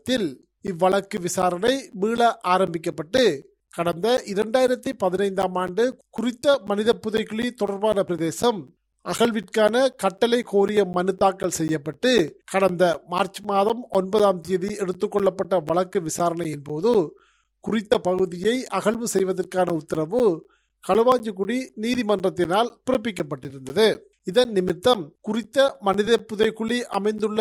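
From 0.17 s to 27.19 s, periodic USB or driver dropouts recur every 0.25 s. Each blocks the audio path for roughly 10 ms and leaves silence, heard as steady ticks. The waveform shows evenly spaced flat gaps, and the spectrogram shows regular thin vertical broadband lines.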